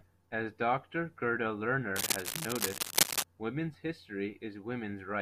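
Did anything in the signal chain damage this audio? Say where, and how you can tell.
Yes. From 1.96 to 3.23 s a dense, uneven scratching and rustling sits over the speech, roughly as loud as the voice itself. This is cable scratch noise, likely from a worn cable or connector in the analogue wiring being moved, its contact resistance fluctuating rapidly.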